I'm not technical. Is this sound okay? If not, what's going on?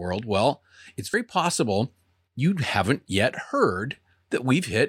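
No. At 1.14 s, between "well it's" and "possible you haven't yet", there's a tiny blip. That's damaged data in a compressed stream: corrupted bytes briefly confuse the decoder.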